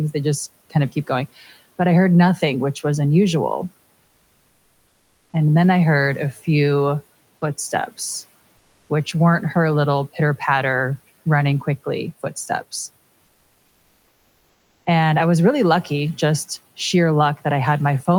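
From 4.05 to 5.33 s, and again briefly from 8.57 to 8.89 s, the real room background drops out and comfort noise sits in its place: a flat, featureless hiss, about 2 dB and then about 1 dB quieter than the actual room noise. The likely cause is discontinuous transmission, with the sender going quiet in pauses and the receiver synthesising filler, which fits Opus DTX. The room's own texture returns when the sound resumes.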